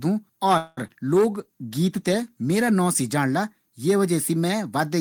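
Call audio freeze, 0.57 to 0.79 s: the speech stops moving forward and the last sound is stretched into a buzzy continuation that fades without reaching silence. The likely cause is packets stalling in transit until the jitter buffer ran dry, leaving the receiver to fill about 0.2 s with generated sound. When delivery resumed, the speech picked up exactly where it had stopped, so nothing was lost, but everything after it now arrives about 0.2 s later.

Short concealed packet loss, 0.87 to 0.90 s: roughly 20 ms of the call never reached the decoder in time. The receiver patched part of the gap by extending the preceding sound, about 12 ms of it, and then blended back into the real signal. What you hear is a brief smear or wobble in the speech, where a short consonant may be weakened or missing.

Call bitrate drop, 1.13 to 2.80 s, ending just before "नाम से जाणला ये": the encoder was pushed from 32 kbps down to 16 kbps after the call's bandwidth estimate fell, and it stayed near that lower rate for about 1.6 s. 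With half the bits, Opus codes the speech more coarsely and trims the top of the spectrum, so this stretch sounds rougher, watery and duller until the rate climbs back.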